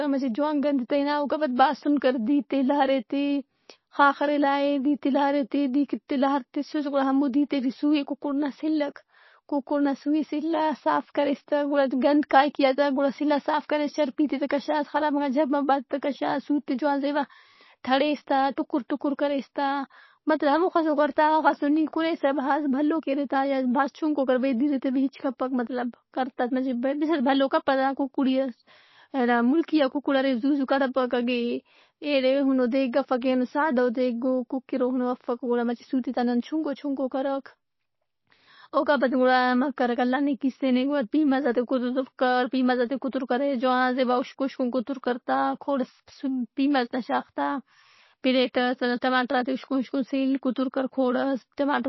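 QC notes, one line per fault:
Throughout: MP3 compression, plainly audible, most likely from a low bitrate around 24 kbps. Nothing above 5.8 kHz, so the spectrogram shows a hard shelf there. Starved weak bands flicker on and off between frames, giving watery, swirly speech and smeared onsets visible as blurred, patchy energy.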